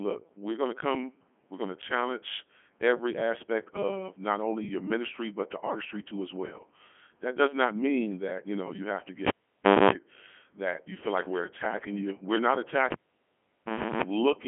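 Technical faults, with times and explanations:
Throughout, Codec 2 vocoder: the speech is rebuilt from sine waves carrying pitch, voicing, energy and envelope, so it sounds heavily buzzy and robotic within 150 Hz to 3.4 kHz, fitting a 3.2 kbit/s mode. Plain band-limiting would keep a natural voice.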